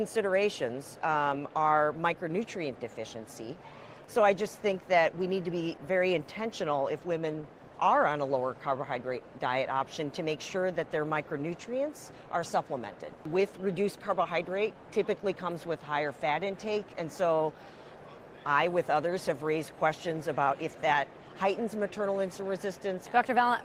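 No technical faults are audible.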